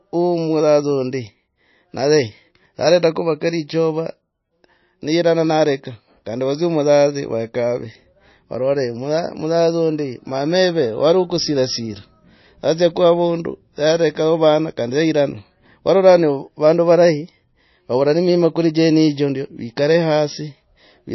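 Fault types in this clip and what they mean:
MP3 compression: the speech stops dead above 5.8 kHz and sounds plainly watery as weak frequency lines flicker, likely an MP3 encode near 26 kbps.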